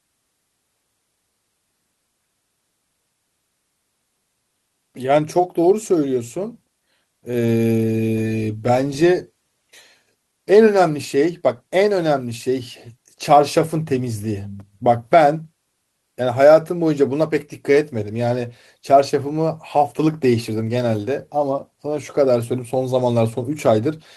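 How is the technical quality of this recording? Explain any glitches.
No technical faults can be heard in the recording.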